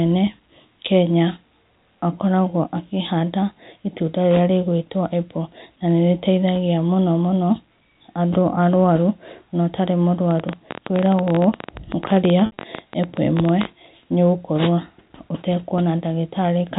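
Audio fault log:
10.31–13.66 s, train of clicks: just after "andũ arũarũ na ũtarĩ", a dense patter of some 50 similar pops at about 14.7 per second, spaced unevenly, ticking over the speech and its pauses and peaking roughly 10 dB above it, likely interference from nearby equipment or a faulty connection or power supply.
12.46–12.56 s, packet loss with pitch repetition: the voice briefly turns held and buzzy, as about 90 ms of audio went missing across a 120 ms stretch, with the longest gap 60 ms, and the receiver bridged each hole by repeating the last pitch period and fading it.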